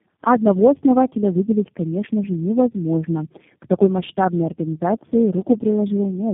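Rough, muffled and warbly speech runs the whole clip, with nothing above about 3.7 kHz: tandem speech coding. The sound fits three low-rate speech coders in a row, such as G.723.1 and G.729A, each re-encoding the previous one's already degraded output, so the damage compounds.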